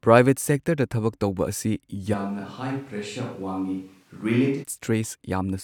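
At 2.15 s the speech abruptly turns roomy and hollow, loses low-end weight, and drops by roughly 5 dB, while the background noise rises to around 35 dB below the speech. The sound snaps back to its close, full character at 4.62 s. This is most likely a switch to a distant microphone: the close microphone's feed dropped out, and a microphone farther from the talker, picking up more room reflection and ambience, carried the signal for that stretch.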